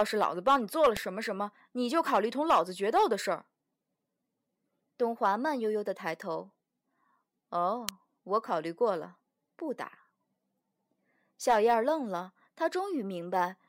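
A nearby switch, motor or static discharge likely arced twice while this speech was being recorded, and the audio line picked up each burst as an electrical switching spike. The result is two sharp, very brief snaps laid over the speech, at 0.97 s and 7.89 s. Each lasts only a couple of milliseconds. The first peaks at around -15 dBFS, and the second is louder at around -10 dBFS.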